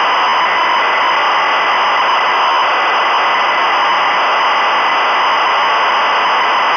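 No faults are audible anywhere in the recording, with no dropouts, clicks, distortion or level jumps at any point.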